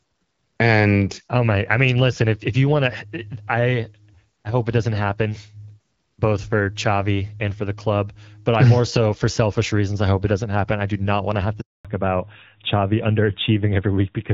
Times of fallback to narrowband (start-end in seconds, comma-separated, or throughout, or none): 11.85-14.34